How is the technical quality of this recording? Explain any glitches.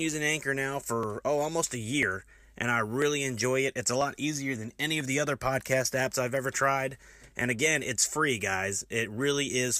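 The speech carries a regular glitch from overlap between stream segments, heard at 1.03, 2.03, 3.02, 4.01, 6.00, 6.99 and 7.98 s. Segments of 1.0 s carry overlapping time stamps, so the player trims a few milliseconds of genuine audio at each boundary, and the waveform jumps, producing a brief click or tiny skip.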